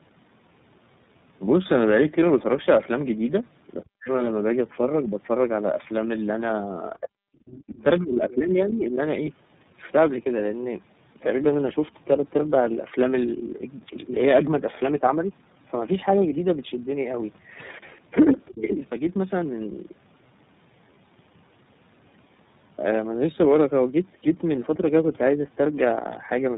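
Speech runs the whole way through sounding rough, muffled and warbly, with nothing above about 3.8 kHz. That is tandem speech coding: the path passed through GSM full rate at 13 kbit/s, then G.711 mu-law at 64 kbit/s, then iLBC at 13.33 kbit/s. It was decoded and re-encoded at each border, so two low-rate speech codecs stacked their losses on top of each other, with iLBC working on audio GSM had already degraded. The talker's level also collapses in three places. From 3.82 to 4.1 s it drops sharply, around 40 dB at its deepest. From 7.98 to 9.0 s it is pulled down by about 20 dB for roughly a second. From 18.61 to 18.82 s there is a lighter dip of about 10 dB. This is likely speech suppressed in double talk: with both ends talking at once, the echo canceller could not tell the local voice from loudspeaker echo and attenuated everything. Around those same moments a second voice comes through, about 25 dB under the speech from 7.46 to 7.83 s, about 20 dB under at 8.3 s, and about 15 dB under from 18.48 to 18.62 s. 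This is the other side's voice leaking through, likely far-end audio from the talker's loudspeaker that the echo canceller failed to remove fully from the microphone signal.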